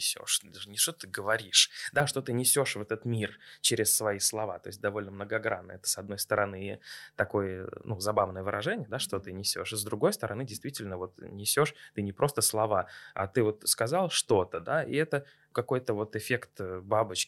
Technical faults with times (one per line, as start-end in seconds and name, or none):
0.00-2.00 pre-emphasis left on